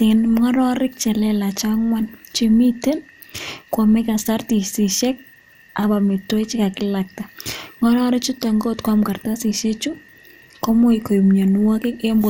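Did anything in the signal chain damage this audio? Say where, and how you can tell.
Yes. The damage sits at the codec stage and runs through the whole speech clip: the sound is dull and carries a gurgling, granular distortion. Nothing reaches above 17.1 kHz, and the upper region flickers as bands drop in and out. This pattern is likely MP2 compression. MPEG Layer II divides the spectrum into 32 sub-bands and shares out bits among them. Starved bands are switched off, and the rest are coarsely quantised, which fits a low bitrate around 80 kbps.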